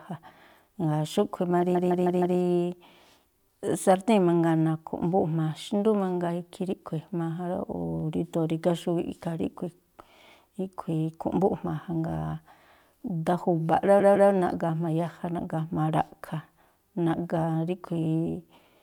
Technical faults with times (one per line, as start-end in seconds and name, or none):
1.74-2.37 repeated frames
13.99-14.30 repeated frames